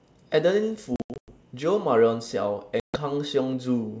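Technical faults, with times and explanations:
0.96–1.32 s, packet loss on an ADPCM call: 240 ms of the sound vanishes in hard-edged silent holes scattered over 320 ms, the longest 100 ms, which fits roughly ten lost packets. After each hole the sound returns with brief distortion, because the decoder's adaptive predictor and step size no longer match the sender's. A plain dropout would resume cleanly.
2.80–2.98 s, packet loss on an ADPCM call: 140 ms of silent holes, pointing to about seven packets lost. The wideband G.722 sound comes back slightly distorted, then settles as the ADPCM state re-converges. That recovery is what separates it from an ordinary mute or edit cut.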